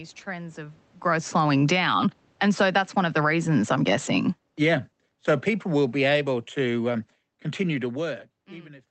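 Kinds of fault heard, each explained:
Automatic gain falling: the gain control decided the input was too loud or too noisy and started pulling its gain down gradually, so the level keeps sinking rather than settling. It kicks in right after "trends of" at about 1.06 s and keeps sliding until about 8.28 s, ending roughly 17 dB lower. The room noise drops right along with the speech, which tells you it's the gain moving and not the talker shifting position.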